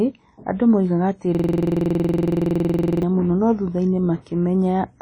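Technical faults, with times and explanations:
throughout – WMA compression: The speech carries a washy, ringing quality, with hiss that swells and fades along with the speech rather than sitting at a steady floor, and nothing is heard above about 10.1 kHz. This is likely a transform codec working at a low bitrate, in keeping with around 32 kbps, where long blocks smear quantisation noise over tens of milliseconds. That breathing, smeared noise tells it apart from MP3-style swirling artefacts or a simple low-pass filter.
1.35–3.03 s – system hang loop: After "andũ moigaga atĩ" the audio locks onto one 46 ms slice and repeats it exactly, about three dozen times, until "mũno no" resumes. The sound card kept replaying its ring buffer while the system stalled, and the length fits a 2048-sample buffer. At a 21.5 Hz repeat rate it comes across as a rough, rapid stutter bordering on a buzz. Because every cycle is identical, it differs from a dropout or a scratched-record skip.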